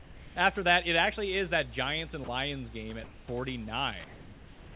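A speech clip carrying mains hum throughout: a steady 60 Hz tone with a few low harmonics, fairly strong at roughly 15 dB below the speech, most likely from a ground loop or a nearby transformer leaking the power line into the signal. On a spectrogram it shows as a thin, unbroken horizontal line at 60 Hz with fainter lines at its multiples, running under everything up to the 4 kHz ceiling of what sounds like a narrowband call path. The background is replaced by comfort noise from 0 to 0.36 s, from 3.04 to 3.28 s, and from 4.04 s to the end. In those pauses the room's own textured noise gives way to a smooth, featureless hiss, about 1 dB quieter in the first gap, about 1 dB louder in the second and about 2 dB quieter in the last, likely because the sender's voice detector stopped transmitting and the receiver filled the silence with synthetic noise. A spectrogram shows uniform, evenly shaded noise across those spans, and on a waveform the noise floor steps slightly at each boundary. 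At 2.24 s there is also sound dropped by the voice detector. About 30 ms of speech vanishes, and the gap is filled with roughly 40 ms of the same steady noise, likely because a quiet stretch was mistaken for background. It shows as a brief notch in the waveform envelope and a short blank slice of flat noise in the spectrogram before speech resumes.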